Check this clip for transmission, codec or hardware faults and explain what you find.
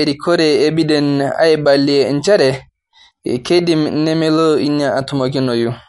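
One codec fault runs through the whole speech clip, and it is plainly audible. There is a watery, swirling quality to the sound, and nothing comes through above 11.2 kHz. The likely cause is MP3 compression at a low bitrate, which fits roughly 48 kbps. With so few bits, the encoder drops weak frequency lines, and they flicker on and off from frame to frame, so s sounds chirp and attacks smear. A plain low-pass filter would also remove the treble above a fixed point, but it would not cause this flickering.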